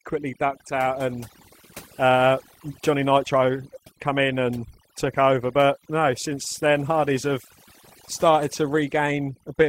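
From start to finish this speech has overdone noise removal: the noise reducer was cranked so hard that any frequency band sitting near its noise estimate gets pulled down or shut off. Soft parts of the voice vanish with it, leaving glittery specks in near-silence.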